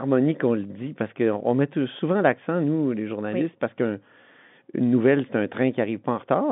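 No technical faults can be heard in the speech, which carries the narrow band of an ordinary telephone line, from about 150 Hz up to 3.6 kHz, as G.711 telephone coding gives it.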